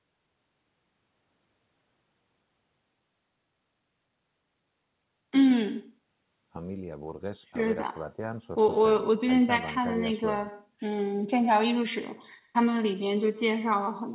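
Right through the call there's echo with no canceller: the far end's loudspeaker feeds its mic, so every phrase comes back roughly a tenth of a second later, about 17 dB down, as a thin shadow trailing the talker, over a band that stops at 4 kHz.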